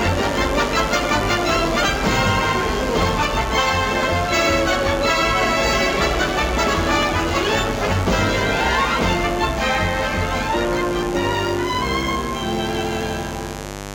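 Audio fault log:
throughout, mains buzz: a steady, raspy buzz sits about 10 dB below the sound, built from sharp spikes twice per 50 Hz cycle, so harmonics reach into the kilohertz range.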